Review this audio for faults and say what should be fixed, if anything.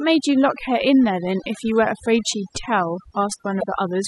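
Overdone noise removal runs through the whole speech clip. The reduction is set so aggressively that frequency bands near the estimated noise floor are pulled down or gated off, taking quiet speech detail with them. This leaves a lowered background broken up into twinkling specks. Prevent it by applying gentler reduction, or by capturing a cleaner recording.

Damaged data in a compressed stream appears from 3.57 to 3.64 s as a brief blip. Corrupted bytes in that stretch leave the decoder unable to parse the affected frames, so it loses sync and hunts for the next valid frame header. Prevent it by transmitting and storing the file with checksums and re-fetching any corrupted segments.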